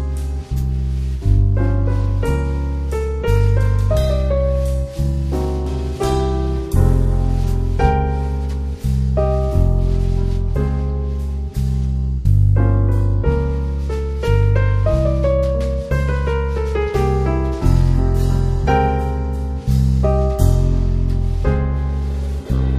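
Nothing stood out as a technical fault anywhere in this clip on listening.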